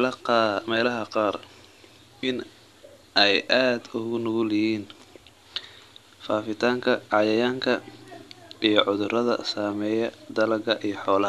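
No technical faults can be heard anywhere in this speech recording. Nothing in the audio stands out as a problem at any point.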